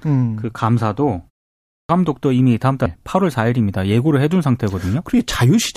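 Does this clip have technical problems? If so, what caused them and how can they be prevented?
Yes. The sound resumes at 1.54 s after a 0.32 s pause, but its opening is swallowed: about 354 ms is lost until 1.89 s. This is a clipped start after a pause. The output device dozed during the short silence and needed time to wake and resynchronise. On a waveform, the sound leaps straight to full amplitude with no gradual onset, and on a spectrogram its energy starts as a sharp vertical edge. Disabling the device's power saving, or feeding it a continuous low-level signal, keeps it ready.

At 2.86 s, compressed frames are skipped. The audio jumps forward by roughly 300 ms, which fits about three frames of 92.9 ms that were missing or rejected as corrupt by the decoder. Storing and transmitting the file intact, with checksums or error-resilient delivery, prevents such gaps.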